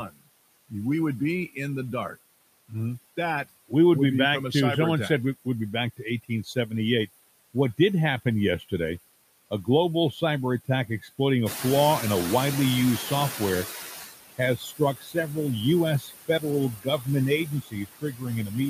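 Throughout the recording, noise suppressor artifacts come from a suppressor that pulls down the bands it judges to be steady noise by about 18 dB, frame by frame. The background therefore dips in the gaps and swells back under the speech.

From 0.03 to 0.72 s, speech is cut by the noise suppressor: it mistakes quieter parts of the voice for background and drops them by as much as about 22 dB. Roughly a third of a second of soft consonants and word tails sounds swallowed. The same thing happens between 5.45 and 7.79 s, with drops of up to about 16 dB over a fifth of a second or so, leaving brief faint patches.

Near 11.5 s the room noise climbs by about 12 dB, settling about 9 dB below the speech. From 11.45 to 14.07 s the noise suppressor is catching up: its estimate of the noise still reflects the quieter room, so the louder noise passes through with less reduction. Over about 2.6 s it adapts, and the noise sinks by about 14 dB.

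Speech is cut again from 14.38 to 15.37 s, with drops of up to about 20 dB affecting around half a second. From 16.0 s to the end, it is cut by up to about 21 dB, and quiet syllables sound swallowed.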